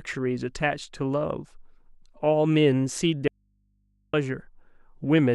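From 3.28 to 4.13 s, speech cuts abruptly to faint hum: an audio dropout to a faint residue, likely signal lost with the input left live.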